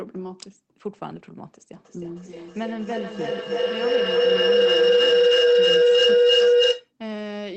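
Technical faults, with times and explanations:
1.75–6.94 s, feedback howl: a tone around 500 Hz swells over the speech, pulsing roughly every 300 ms and peaking about 14 dB above the talker before it stops. Two devices in the same room were on the call, so sound from one loudspeaker re-entered the other microphone and returned louder on each lap. The repeats narrowed to the frequency the loop favoured, and the pulsing follows that loop delay, audible despite the call codec's 8 kHz bandwidth limit.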